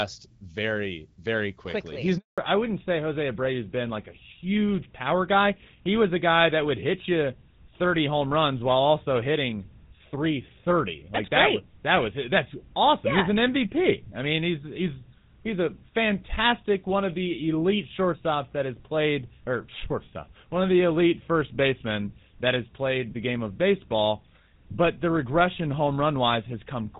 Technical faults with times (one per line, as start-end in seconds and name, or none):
2.18-2.38 handover gap
2.38-27.00 fallback to narrowband